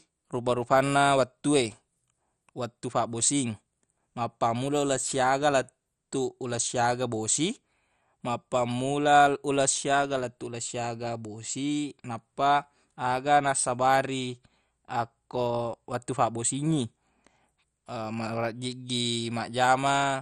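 Throughout the speech, the audio was likely squeezed through MP2 compression at a starved bitrate, the kind of heavy damage that fits a rate near 56 kbps. With too few bits to share among its sub-bands, the encoder switches the upper bands off entirely, leaving nothing above 13.7 kHz, and quantises the surviving bands coarsely. The result is a dull, muffled top end with a gurgling, granular roughness as bands flicker in and out.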